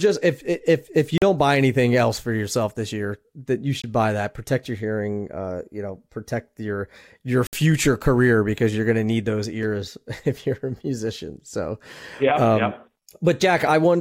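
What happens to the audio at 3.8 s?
The speech cuts out for about 20 ms, from 3.82 to 3.84 s, then picks up further along. That's likely a Bluetooth dropout, which fits a single lost packet.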